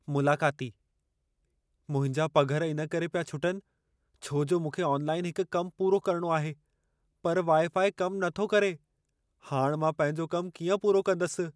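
Nothing in the speech stood out as a technical fault on listening.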